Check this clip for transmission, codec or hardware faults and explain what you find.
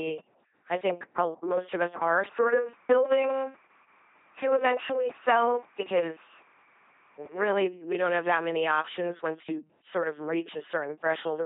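The speech has been through an LPC-10 vocoder for its whole length, and the damage is heavy. The speech comes out as a buzzing, mechanical robot voice. Each moment is rebuilt either from a pitch pulse train or from noise, and both feed a short all-pole filter that stands in for the vocal tract. Where that voiced-or-unvoiced choice goes wrong, a hiss replaces a vowel or a buzz sits under a consonant. The coarse, synthetic quality points to a low-rate coder running at about 2.4 kbit/s. On a spectrogram, voiced stretches show rigid, evenly spaced harmonic stripes with smeared formants, and unvoiced stretches show flat noise. Nothing appears above 3.8 kHz. In the waveform, voiced segments look like repeated identical pulses rather than natural cycles.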